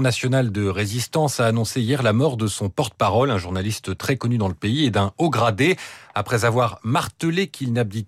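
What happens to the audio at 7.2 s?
Nothing goes wrong at 7.2 s; the speech carries on cleanly through that moment without any audible fault.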